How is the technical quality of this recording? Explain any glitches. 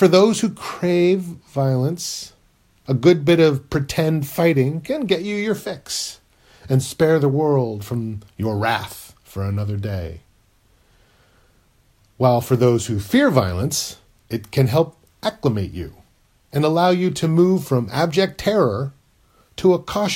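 No technical faults are audible.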